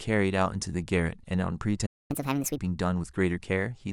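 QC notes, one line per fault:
1.86–2.11 s, playback stall: the speech cuts out mid-flow and the output goes silent for about 234 ms before resuming where it stopped. The likely cause is the player running out of buffered data or its playback thread being blocked.
2.11–2.58 s, catch-up at higher speed: immediately after the gap the speech runs at 1.5 times normal speed, with pitch raised by roughly seven semitones, as the player resamples its backlog to recover lost time, then drops back to normal rate.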